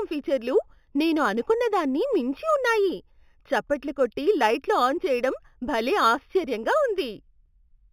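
Throughout the speech, imaging from linear upsampling: straight-line interpolation from what sounds like an 8 kHz original leaves mirrored spectra from 4 to 8 kHz, roughly 25 dB down, giving sibilants a faint metallic shimmer.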